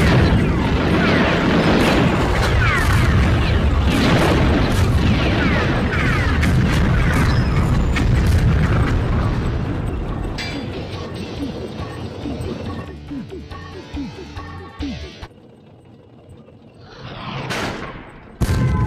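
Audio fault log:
No faults found in this recording.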